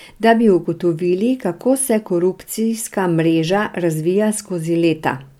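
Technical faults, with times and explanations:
No technical faults turn up anywhere in the speech, so there are no times or explanations to give.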